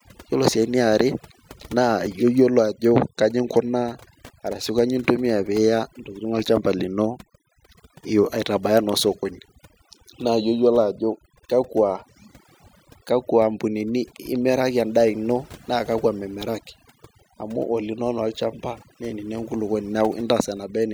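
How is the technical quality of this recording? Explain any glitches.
The main problem is overdone noise removal, and it runs through the whole clip. A noise reduction stage was pushed too hard, so any frequency band sitting close to its noise estimate gets pulled way down or cut entirely. That also takes out the softer parts of the speech. You end up with a background that drops away and breaks up into little twinkling specks.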